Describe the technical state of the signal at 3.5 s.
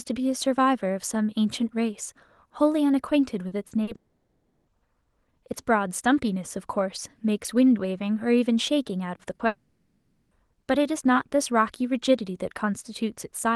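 Around 3.5 s a short concealed packet loss occurs: about 40 ms of the call's audio failed to reach the decoder in time, and the receiver covered the gap by extending the preceding sound, following its pitch where voiced or substituting shaped noise where not, before blending back into the real signal. From roughly 3.47 to 3.54 s this comes across as a brief smear or wobble, and a short consonant there can disappear.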